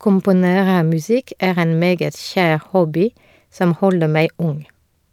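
Listening to this speech recording, nothing stood out as a technical problem at any point.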